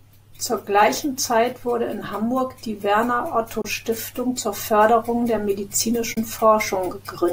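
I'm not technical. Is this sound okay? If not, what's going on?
No. There is a Bluetooth dropout at 3.62 to 3.65 s and again at 6.14 to 6.17 s: the speech briefly cuts to silence for about 23 ms, then carries on as if it had kept playing. This is likely one small chunk of wireless audio, about one packet's worth, arriving too late and being skipped.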